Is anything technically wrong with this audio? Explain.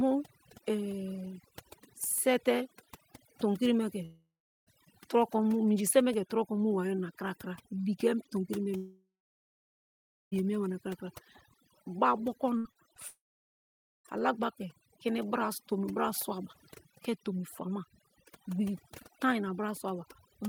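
Yes. Several faults are audible.

Overdone noise removal runs through the whole speech clip. The noise reducer was set so aggressively that frequency bands near its noise estimate are pushed down or switched off, and the quieter parts of the voice are cut along with the hiss. The background drops and breaks up into twinkling specks.

Three long network dropouts, likely from the network, occur at 4.05 to 4.68 s, 8.76 to 10.34 s and 13.08 to 14.20 s. In each, the receiver extends the last sound as a fading buzz or hiss and then falls silent, for about 0.36 s, 1.21 s and 0.86 s respectively. Roughly 0.62 s, 1.56 s and 0.98 s of audio is lost, and playback resumes past the gap.

A burst of packet loss at 12.58 to 12.67 s removes about 80 ms. The receiver fills the hole by continuing the preceding sound and turning it down as the gap runs on. This produces a held buzz on voiced material or a fading hiss otherwise. 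The audio picks up again further along, with that stretch missing.

Short concealed packet loss follows at 12.71 to 12.85 s, where about 40 ms is missing and a little extra time is inserted, and again at 12.94 to 12.98 s, where about 20 ms is missing. The decoder bridges each gap by extrapolating the last pitch or shaped noise and crossfading back into real audio. The result is a brief smear or wobble.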